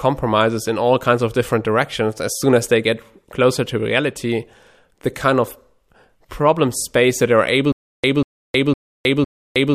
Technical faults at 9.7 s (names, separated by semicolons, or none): stutter with silent gaps